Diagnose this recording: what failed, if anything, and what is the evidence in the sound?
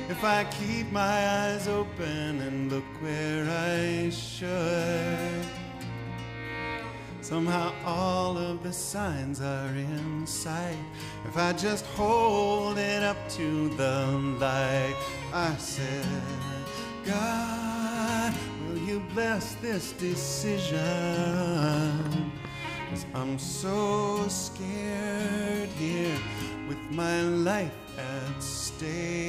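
A brief train of clicks, roughly seven sharp ticks at an uneven 6.3 per second from 21.34 to 22.46 s, standing about 10 dB above the surrounding sound. The near-identical pulses point to likely electrical interference or a faltering interface in the analogue wiring or converter stage.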